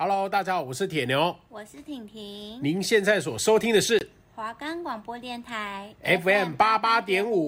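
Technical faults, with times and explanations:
3.99 to 4.03 s, corrupt frame muted: the speech cuts out abruptly to silence for about 40 ms, then picks up right where it should. Some compressed frames got damaged bits, the decoder wouldn't accept them, and the player filled the gap with silence. A 40 ms hole fits two dropped 20 ms frames. Timing stays intact, so nothing after the gap is shifted, but the sudden edge makes it sound like a quick dropout.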